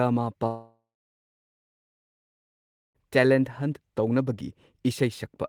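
Between 0.47 and 2.98 s the stream likely suffers a long network dropout, about 2.5 s of audio never arriving. The receiver extends the last sound as a fading buzz for about a third of a second, then leaves silence until speech returns, the missing stretch gone.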